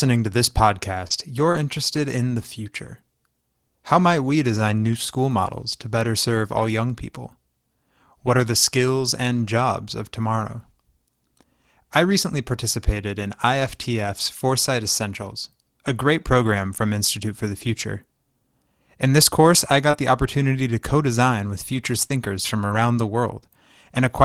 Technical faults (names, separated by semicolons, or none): short concealed packet loss; lost packet rebuilt from error correction; scattered short gaps